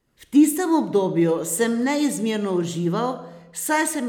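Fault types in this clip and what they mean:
Nothing stood out on listening to this speech recording.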